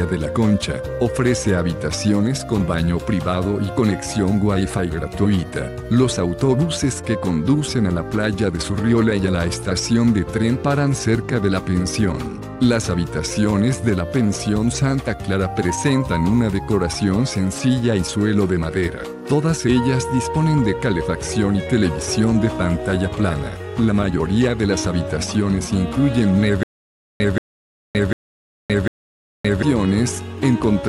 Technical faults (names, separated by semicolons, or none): stutter with silent gaps